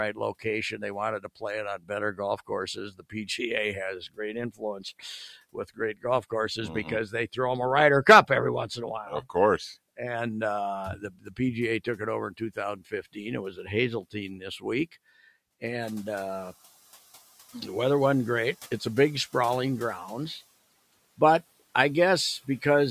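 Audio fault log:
0.13–3.39 s, 3.99–7.37 s, 8.28–9.35 s and 10.97–14.93 s: speech cut by the noise suppressor. Within these stretches, scattered soft consonants and word endings are pulled down with the background, at most by about 16, 18, 12 and 16 dB. The losses add up to roughly 0.7 s, half a second, a tenth of a second and a full second. The suppressor mistook quiet speech for noise, so the voice itself sounds swallowed as it is turned down with the background.
15.8–16.51 s: noise suppressor catching up. The room noise jumps by about 11 dB near 16.0 s and briefly comes through with little reduction, then sinks over 710 ms, ending about 7 dB lower, as the noise estimate adapts. Here the background swells and fades, and the noise settles about 25 dB below the voice.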